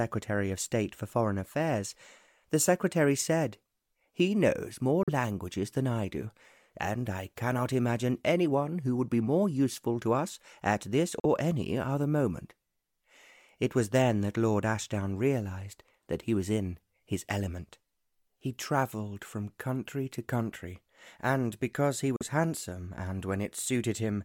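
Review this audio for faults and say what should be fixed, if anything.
Bluetooth dropout at 5.03–5.09 s, 11.20–11.26 s and 22.16–22.23 s. Each time the output falls silent for about 60 ms, then picks up further along, as though it had kept playing. The likely cause is wireless audio packets arriving too late and being discarded, with each gap fitting the loss of two consecutive frames. Keeping the headphones close to the source with a clear path, away from competing 2.4 GHz traffic, would prevent these gaps.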